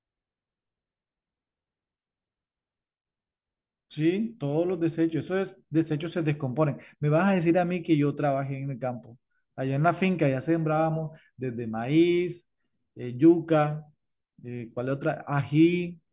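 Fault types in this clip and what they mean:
No technical fault can be heard anywhere in the speech. There is nothing to list under any fault type.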